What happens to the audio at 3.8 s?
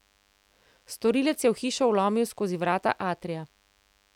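At 3.8 s the speech is accompanied by DECT cordless phone buzz, which runs through the whole recording rather than starting at that moment. A nearby DECT handset or base station transmits a radio burst every 10 ms, and the audio circuitry rectifies those bursts into the signal. The result is a thin, steady buzz at 100 Hz with a dense stack of harmonics, sitting faintly underneath the speech at roughly 40 dB below it.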